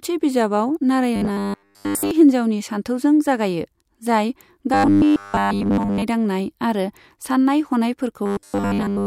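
Speech with robotic sound from repeated short buffers at 1.16–2.11 s (before "हिन्जावनि सानथौजों जागायो"), 4.74–6.03 s (before "दांनाय आरो") and 8.26–9.07 s: a rigid 100 Hz buzz, likely from a 10 ms slice looped almost entirely. The waveform shows identical 10 ms cycles, and the spectrogram shows flat harmonic lines at multiples of 100 Hz.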